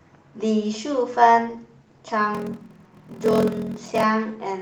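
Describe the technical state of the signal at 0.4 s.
At 0.4 s the signal is intact, with no fault audible at that moment.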